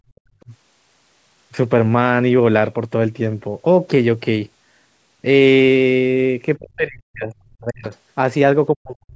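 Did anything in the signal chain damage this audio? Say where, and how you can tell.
Yes. In the first 0.16 s the room background dips by about 21 dB for some 70 ms in total and then returns. That is the call processing stage: background gated by the echo canceller, which clamped the microphone while its loudspeaker was playing.

At 0.16–0.2 s and again at 0.4–0.44 s, faint scraps of a second voice appear, around 40 dB below the main speech. This is likely the other side's voice leaking through, as loudspeaker echo the canceller failed to remove from the microphone.

The speech itself sinks or breaks up at 0.46–0.53 s (about 15 dB down), at 6.57–7.85 s (up to about 40 dB, roughly a second in total) and from 8.75 s to the end (about 40 dB). The likely cause is speech suppressed in double talk, where the canceller turned everything down during overlapping talk.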